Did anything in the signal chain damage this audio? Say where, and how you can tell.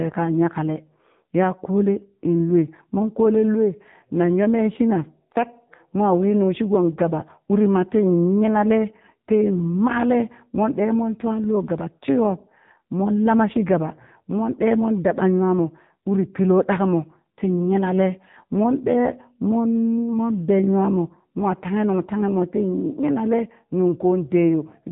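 Yes, the codec stage: AMR narrowband mobile coding throughout, with nothing above 3.8 kHz, heavy buzzy, synthetic speech, which fits a low AMR-NB mode near 6.7 kbps.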